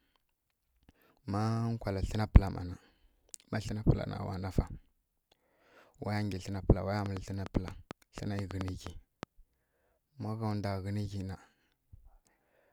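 Speech with a train of clicks from 7.06 to 9.24 s, after "wa ya": about 5.5 irregular ticks per second, well above the speech, likely interference, showing as thin vertical spectrogram lines and sharp waveform spikes.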